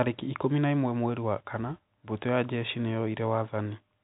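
No fault can be heard in this speech, which comes through a G.711 telephone coding path with nothing above about 3.8 kHz and only the faint, level-following quantisation noise that fits the 64 kbps mu-law format.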